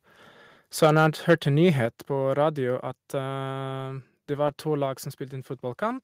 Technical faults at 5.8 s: none

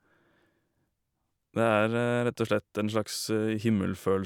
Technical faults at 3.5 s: none

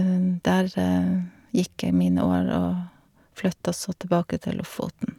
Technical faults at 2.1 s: none

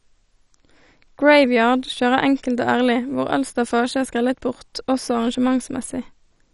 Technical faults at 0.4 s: MP2 compression

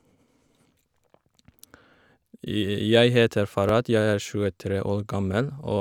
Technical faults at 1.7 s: overlapping chunks

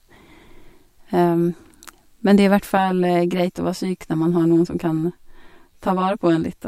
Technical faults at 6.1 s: channel delay (comb filtering)

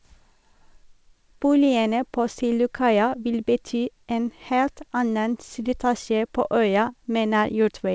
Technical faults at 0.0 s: clock drift between sender and receiver

